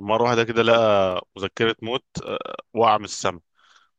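The stream likely lost a tiny run of dropped samples, well under a millisecond each time, at 1.11 s and again at 2.28 s. The speech waveform jumps straight to a later value, so each gap is heard as a single sharp click.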